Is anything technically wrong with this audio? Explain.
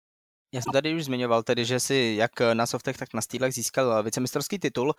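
Yes. Short glitches at 0.62–0.73 s, fairly loud, and 3.06–3.12 s, much fainter, are corrupt frames decoded: bit-damaged compressed frames played anyway, scattering energy to wrong frequencies.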